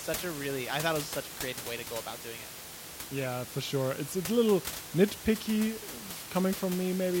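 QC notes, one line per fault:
No faults heard anywhere in the clip.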